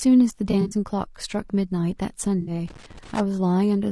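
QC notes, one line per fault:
Throughout: low-delay AAC compression. The sound has a rough, grainy texture, with noise filling the gaps between pitch harmonics and a thin, synthetic top band. This is likely a low-delay codec such as AAC-ELD at a low rate, around 32 kbps. Its short frames of roughly 20 ms cannot resolve closely spaced harmonics well, and they spend bits that the bandwidth and detail then lack. The damage is plainly audible.
0.51–0.74 s and 2.41–2.51 s: AAC frame loss with concealment. Chunks of the coded stream went missing, and the decoder patched each gap from the last good spectrum. In the first stretch about 100 ms is missing, scattered across 0.51–0.74 s, with the longest single gap around 40 ms. That produces a smeared, noisy, phasey patch rather than a dropout. The second gap is 60 ms, which fits three 20 ms frames, and sounds like a briefer smear of the same kind.
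2.66–3.20 s: loose connector crackle. A worn or dirty contact somewhere in the analogue path kept making and breaking while it moved. Each break chops the signal, so the half-second stretch carries an irregular burst of scratchy crackle riding on top of the speech. This is unlike the smoother smearing of the concealed frame losses just before it.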